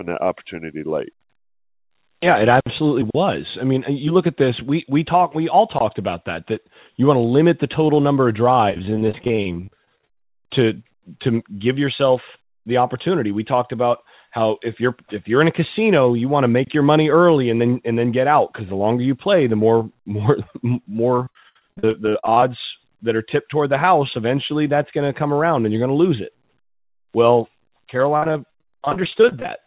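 Repeated packet loss (robotic sound) hits this speech three times: 8.7–10.23 s, 21.15–22.43 s and 28.17–29.48 s. Packets keep dropping, and each hole gets patched by stretching the last sound, so about a third to two-fifths of each stretch turns choppy over the 4 kHz-limited call audio.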